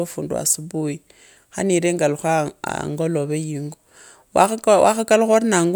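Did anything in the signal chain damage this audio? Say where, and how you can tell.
No, nothing in the signal chain has left an audible mark on this speech recording.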